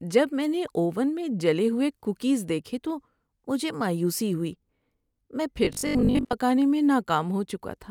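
From 5.65 to 6.35 s the speech goes metallic with a fixed 50 Hz buzz: robotic sound, likely from repeated short buffers, with roughly half the audio replaced.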